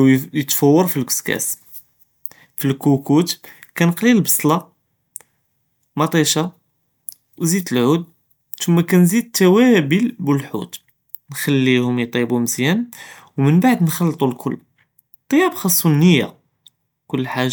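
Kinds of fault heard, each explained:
No technical faults heard.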